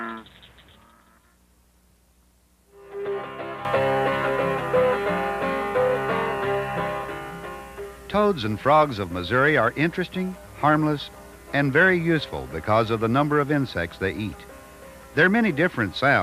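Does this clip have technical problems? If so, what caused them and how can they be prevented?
Yes. At 3.65 s the whole signal steps up in level by about 12 dB in an instant and stays there through to the end, with the background noise jumping together with the sound. This sudden gain jump likely comes from a digital gain change applied between one sample and the next, such as a level setting or bit shift taking effect with no ramp, so everything after that point is simply multiplied. It can be prevented by ramping any gain change smoothly over several milliseconds instead of switching it instantly.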